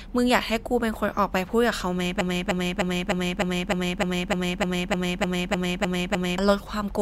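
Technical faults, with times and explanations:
2.21 to 6.38 s, broken-record loop: one 0.3 s fragment of speech repeats exactly, back to back, 14 times, and the speech due in those four seconds is lost. A stalled player, encoder or stream likely kept resending the last piece it held.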